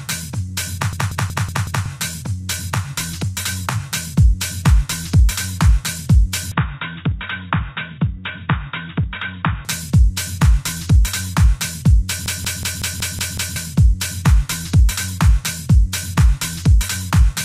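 From 0.93 to 1.86 s a 186 ms fragment repeats five times in a machine-gun stutter at 5.38 Hz. This is a system hang loop: the machine froze while the sound hardware kept replaying one ring buffer, which fits an 8192-sample buffer. About a second of audio is lost.

From 6.52 to 9.65 s the sound abruptly turns dull and boxy, with nothing above 3.8 kHz. It drops about 10 dB in level, and a faint new noise floor appears, with no gap at the change. The likely cause is the input switched to a poorer device.

From 12.26 to 13.56 s another system hang loop brings back the same 5.38 Hz stutter, with the 186 ms piece cycling seven times. Roughly one and a half seconds of audio is lost.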